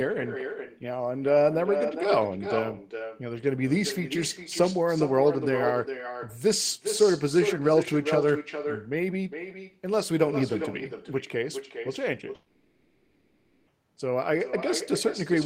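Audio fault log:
throughout, echo with no canceller: every phrase is followed by a second, quieter copy arriving around 0.4 s later, sitting about 8 dB below the direct sound and sounding thinner. The far end is playing the call through a loudspeaker that its microphone picks up, and nothing subtracts that signal before it returns. On a spectrogram each syllable's harmonic pattern reappears faintly, shifted right by that delay. The waveform shows a smaller trailing envelope behind each burst.
12.35–13.70 s, long network dropout: for about 1.3 s the speech gives way to a synthetic continuation of the last sound, a buzzy or hissy tone that fades, and the speech then resumes further along with that stretch missing. This is likely a run of packets that never arrived, with the receiver filling the entire gap with concealment rather than leaving silence. The spectrogram shows a smeared, repetitive band pattern losing energy across the gap. 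The waveform shows a decaying, regular envelope instead of normal speech.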